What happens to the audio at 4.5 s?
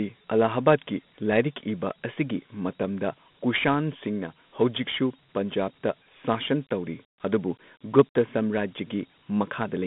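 At 4.5 s the speech carries Dialogic VOX ADPCM, as it does throughout: coarse 4-bit steps add gritty hiss, the band spans roughly 150 Hz to 3.6 kHz, and nothing sounds above 3.8 kHz.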